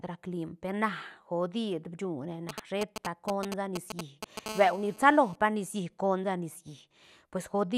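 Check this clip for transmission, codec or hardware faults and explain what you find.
Two hardware faults from a nearby 2G phone, both interference picked up by the audio circuit rather than anything in the speech itself.

GSM signalling bursts, 2.49 to 4.39 s: a phone close by is signalling, sending short groups of radio bursts that the audio circuitry rectifies. The result is a galloping dit-dit-dit of brief 217 Hz buzzes, nearly as loud as the speech.

GSM phone buzz, 4.46 to 5.36 s: a phone close by is now in a call, transmitting continuously at 217 bursts per second, and the rectified pulses produce a steady, hard, raspy 217 Hz buzz rich in harmonics, at about 15 dB below the speech.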